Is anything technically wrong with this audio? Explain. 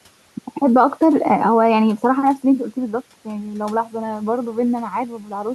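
Yes. From 5.19 to 5.32 s the speech is cut by the noise suppressor: it misjudges part of the speech as noise and turns it down by up to about 7 dB. About a tenth of a second of sound comes out swallowed and faint, against room noise sitting about 27 dB below the speech.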